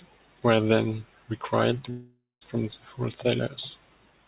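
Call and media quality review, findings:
Long network dropout, 1.9–2.43 s: fading buzz, then silence; speech resumes with about 0.52 s lost. Likely sustained packet loss with concealment, not a brief glitch. Band limit at 4 kHz fits G.711.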